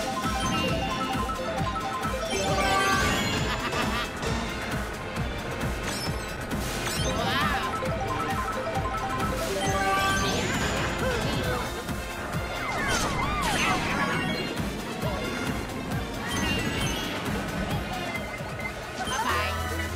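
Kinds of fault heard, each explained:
Call bitrate drop: From 12.08 to 15.42 s the call's bandwidth estimate collapsed and the encoder got squeezed from 128 kbps down to 28 kbps, sitting at that floor for about 3.3 seconds. With so few bits to spend, the codec quantises everything much more coarsely and trims away the top end, so the sound goes dull, rough and watery through that stretch before the bitrate climbs back and the clarity returns.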